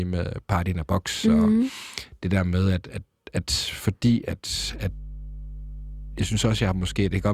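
From 4.53 s, right after "at at at fordi", mains hum enters and lasts to the end: a steady 50 Hz tone, fairly loud, roughly 15 dB below the speech, from power-line coupling such as a ground loop. A spectrogram shows a constant horizontal line at 50 Hz.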